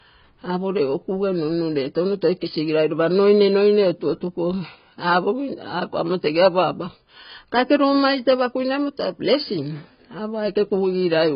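From start to finish the speech sounds dull and smeared, with nothing above about 5.1 kHz and a warbly, fizzy texture on sibilants and held vowels. That's likely AAC compression at a heavy setting, consistent with AAC-LC at something like 16 kbps. With so few bits per frame, the encoder pulls the cut-off down and starves the quieter frequency bands, so the spectrum gets patchy and the highs just vanish.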